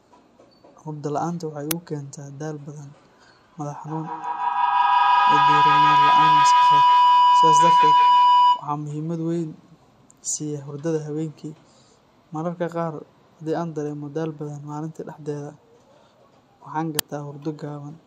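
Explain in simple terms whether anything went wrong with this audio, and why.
From 3.87 to 8.72 s there is feedback howl: a sound loop between two devices in one room grows louder each pass, becoming a piercing tone around 1 kHz. An ordinary echo fades away, but this one keeps building and drowns out the speech.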